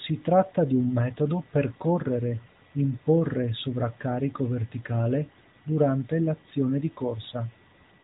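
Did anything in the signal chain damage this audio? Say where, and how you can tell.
No, nothing in the signal chain has damaged this speech. It has come through an AMR narrowband mobile codec, so nothing above 4 kHz is present and there is the light coding texture expected of that path, which fits the 12.2 kbps mode.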